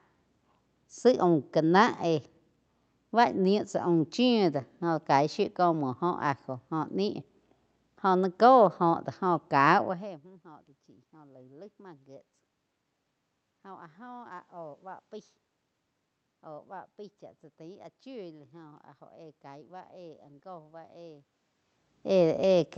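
No faults are audible anywhere in this recording.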